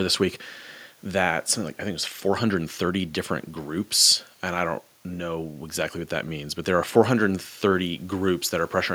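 No technical faults can be heard anywhere in the recording; the signal stays continuous and stable throughout.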